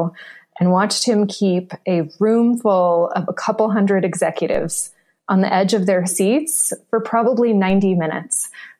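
DC steps at 4.55 s and 7.7 s shift the waveform's zero line, each heard as a low thump, with the offset then decaying away through a 2 Hz high-pass. Unlike a dropout, the sound carries on unbroken.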